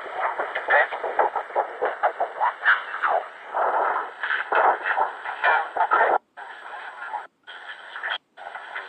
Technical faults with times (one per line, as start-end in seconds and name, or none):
0.67-8.37 clock slip clicks